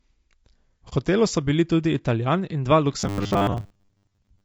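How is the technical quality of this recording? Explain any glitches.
The technical quality is poor, with plainly audible damage throughout and two distinct glitches.

Throughout, the speech sounds rough and grainy, with noise between harmonics and a thin top band, likely from low-delay AAC compression at a low bitrate around 32 kbps.

From 0.89 to 0.93 s there is a brief dip of about 30 ms. This is AAC frame loss with muting: the missing audio was zeroed and faded out and in.

From 3.00 to 4.44 s the speech becomes a rigid, metallic 100 Hz buzz. This is robotic sound from repeated short buffers, likely from roughly 10 ms chunks being repeated in place of the real audio for most of the passage.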